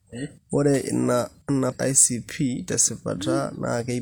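At 1.68 s the speech breaks into a brief glitch that lasts until 1.73 s. This is damaged data in a compressed stream. For about 54 ms the coded bytes are wrong. The decoder cannot read those frames properly. It either decodes garbage or throws them away. Sync is lost, so it hunts for the next valid frame header. The result is a short disruption cutting across the voice.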